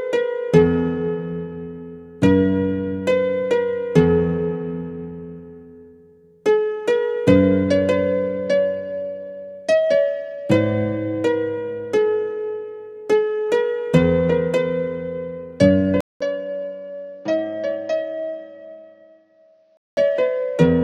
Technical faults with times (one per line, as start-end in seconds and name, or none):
16.01-19.97 input switched to a poorer device